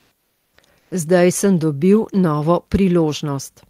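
From 0 to 0.49 s, the background becomes a steady, featureless hiss about 3 dB quieter. From 0.79 to 0.91 s it returns, about 3 dB louder. This is comfort noise in place of the background, likely from Opus DTX filling pauses.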